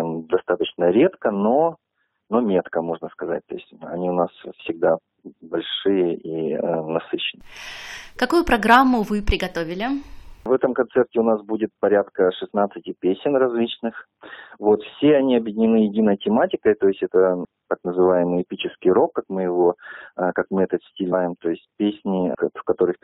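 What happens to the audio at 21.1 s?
At 21.12 s the compressed stream carries damaged data: a short run of bytes in the encoded file is wrong, so the decoder cannot read the frame it lands in, loses its place in the bitstream and has to hunt for the next valid frame header before playback resumes. The damage lasts only about 0.02 s, from 21.12 to 21.14 s, and it comes through as a brief, sharp blip or chirp cutting across the sound.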